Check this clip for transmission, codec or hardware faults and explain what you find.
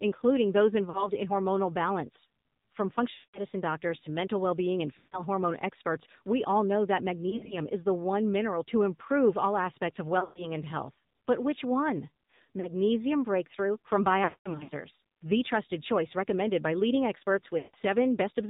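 Two faults are present: narrowband mobile coding throughout, and repeated dropouts from lost AMR speech frames.

AMR narrowband mobile codec: The speech sounds buzzy, synthetic and muffled, with nothing above 4 kHz. The low bit rate of 7.4 kbps forces crude vocal-tract modelling.

Lost AMR speech frames: Brief warbles, smeared stretches and fades occur at 0.90–1.11 s; 3.14–3.41 s, just before "doctors to mental well"; 4.98–5.22 s; and 7.30–7.55 s, between "we all know that" and "is the one mineral". Further gaps fall at 10.20–10.52 s; 12.60–12.68 s, after "which one"; 14.24–14.70 s; and 17.58–17.75 s. The decoder repeats the last good frame at falling gain. The longest gaps run 200 to 300 ms and fade toward silence before the speech returns roughly.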